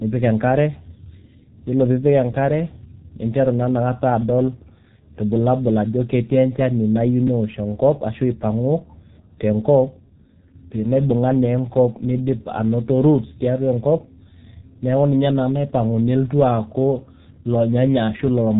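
G.723.1 codec damage runs from start to end of this speech clip, and it is heavy. The codec squeezes the signal into 30 ms frames and rebuilds the voice from a coarse model that updates only once per frame, at a data rate consistent with its 6.3 kbit/s mode. Nothing survives above 3.8 kHz, so the speech sounds muffled and hoarse, sibilants and plosives smear together, and consonants lose their edges.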